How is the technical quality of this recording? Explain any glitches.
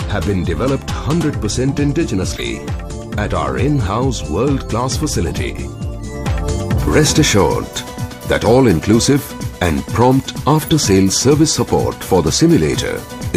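Two short glitches break up the recording. Corrupt frame decoded, at 2.36–2.41 s and 10.55–10.69 s: damaged compressed frames were played anyway, misplacing energy in frequency, heard as loud chirps, squeaks, blips or bursts of noise peaking near about -10 dBFS. The second burst is longer, spanning several frames.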